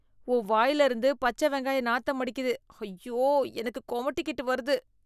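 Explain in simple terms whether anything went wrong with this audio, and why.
Nothing went wrong here; no technical fault can be heard anywhere in the speech.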